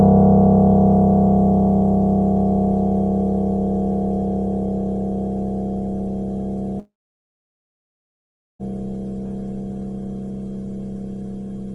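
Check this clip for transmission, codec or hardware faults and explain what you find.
One fault stands out. From 6.79 s to 8.62 s the sound breaks off: the last moment smears into a brief fading buzz, then about 1.7 s of near-silence before audio resumes with that stretch missing. This is likely a long network dropout, where the receiver extended the final sound and then went quiet until packets arrived again.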